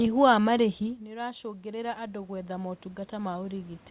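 From 1.05 to 3.9 s, after "wa marĩhi", automatic gain rising: the control gradually adds about 12 dB, so speech and room noise swell together.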